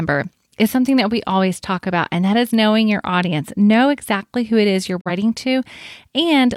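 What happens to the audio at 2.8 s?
Nothing goes wrong at 2.8 s; the speech carries on intact through that moment with no dropout, click or distortion.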